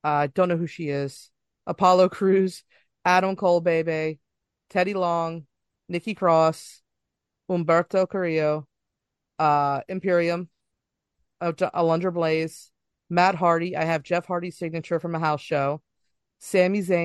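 Nothing here stands out as a technical fault, so there's nothing to point to anywhere along the way.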